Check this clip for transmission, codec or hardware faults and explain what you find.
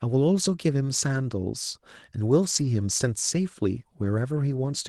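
Two brief stretches of lost packets rebuilt from error correction are audible in the speech. The first runs from 2.51 to 2.65 s and covers four separate lost packets. The second is a single short event at 4.03 s. In each case the packet following the lost one carried a low-bitrate copy, and the Opus decoder played that copy instead of leaving a gap. The result is a brief rough, grainy patch rather than a dropout. On a spectrogram these appear as smeared, noisier slices without a silent column. The waveform stays continuous through both.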